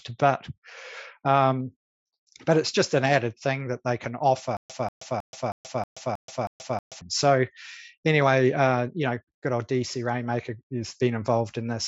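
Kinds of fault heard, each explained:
Stutter with silent gaps: playback likely stalled, replaying its last fragment at each retry before running empty. From 4.57 to 7.01 s, a 188 ms burst recurs eight times every 317 ms, separated by 129 ms of digital silence. The audio due there is lost.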